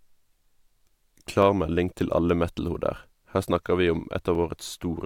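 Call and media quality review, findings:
Block of digital silence at 4.35 s in speech. A 2 ms run of samples drops to silence and back with no fade, so the hard edges give a short tick or dip rather than an audible hole. Probable component is the playback or processing path. This fits an output buffer that wasn't filled in time, or samples zeroed after a calculation returned invalid values.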